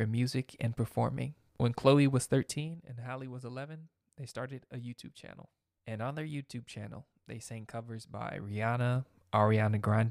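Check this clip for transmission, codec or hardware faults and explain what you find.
Two bursts of zipper noise are present in the speech. From 2.42 to 2.92 s and from 7.98 to 9.0 s, the level moves in bare steps of about 2 dB: roughly 15 dB down, then back up. Each unsmoothed jump clicks, giving a ticking zip at around fifteen, then seven, steps a second.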